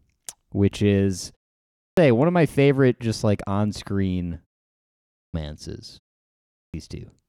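At 1.67 s, after a 0.39 s pause following "which is", the speech resumes with its onset missing: about 0.30 s is lost before "one of my favorite". The same clipped start after a pause recurs at 5.07 s (0.27 s lost after a 0.69 s pause) and 6.46 s (0.28 s lost after a 0.55 s pause). The output path dozes during silence and needs roughly 0.3 s to wake, so each phrase begins abruptly, without its first sounds.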